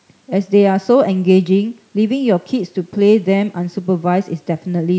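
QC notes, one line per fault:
Nothing faulty heard; call microphone processing sounds normal.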